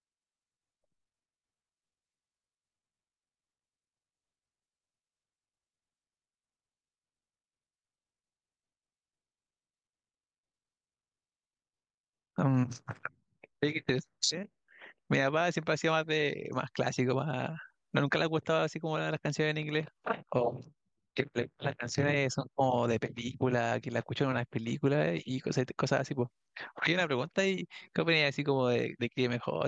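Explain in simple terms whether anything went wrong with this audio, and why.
Nothing went wrong with this recording: the speech comes through steadily, with no dropouts, glitches or distortion from the signal chain anywhere in it.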